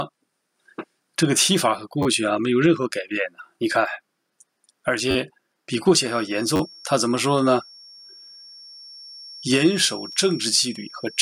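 The audio has three distinct faults. Repeated buffer stutters occur at 2.03–2.06 s, 3.72 s, 5.11–5.15 s, 6.56–6.60 s and 10.12–10.14 s. Each time, a block of about 10.7 ms, which fits a 512-sample buffer, plays again one to four extra times with a hard join, because fresh audio arrived late. The result is a short buzzy stutter rather than a gap. At 2.61–2.63 s a corrupt frame decoded produces a brief glitch, as damaged compressed data within what sounds like a single frame was played anyway, scattering energy to the wrong frequencies. From 6.02 s to the end, a thin steady whistle at 5.5 kHz, about 20 dB below the programme and swelling and fading slowly, is likely a feedback whistle from a loudspeaker-to-microphone loop held just short of runaway.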